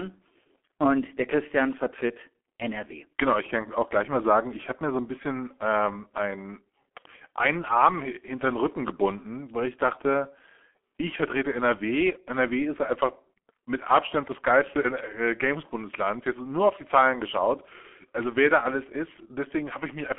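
From start to finish the speech sounds muffled, thin and hoarse, with consonants smeared together and a grainy roughness. This is G.723.1 codec damage, and it is heavy here. The sound sits in a narrow telephone band of roughly 250 Hz to 3.4 kHz, with nothing at all above 3.7 kHz. The codec models speech in coarse 30 ms frames at a very low rate, and the degree of damage fits about 6.3 kbit/s, so quick articulation blurs.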